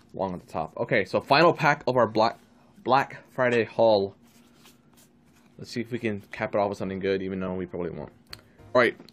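At 8.74 s, compressed frames are skipped: a stretch of roughly 50 ms never reaches the decoder's output, so the sound lurches forward. The join shows as a short discontinuity in the waveform and a vertical smudge on a spectrogram.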